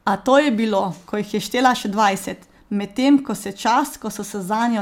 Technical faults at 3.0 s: none

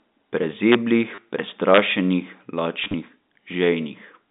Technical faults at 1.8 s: integer overflow

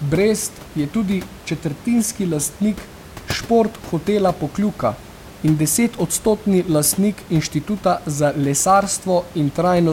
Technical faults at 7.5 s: none

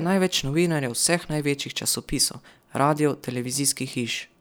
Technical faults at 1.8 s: none

